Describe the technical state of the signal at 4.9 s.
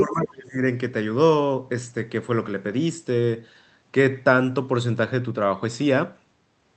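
At 4.9 s the signal is intact, with no dropout, clipping, glitch or other audible fault at that point.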